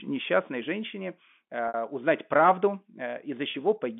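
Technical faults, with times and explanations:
1.68–1.74 s and 3.51–3.54 s, packet loss with pitch repetition: a 60 ms gap (fitting two lost packets), then a 30 ms gap (about one packet). The receiver bridged each by looping the last pitch cycle, so the sound briefly holds with a buzzy, frozen quality.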